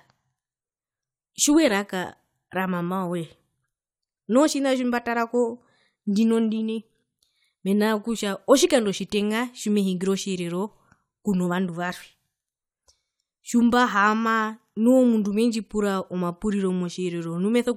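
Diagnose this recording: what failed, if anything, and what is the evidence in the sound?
Nothing here points to a failure at any stage, so there's no evidence of a fault to report in this speech recording.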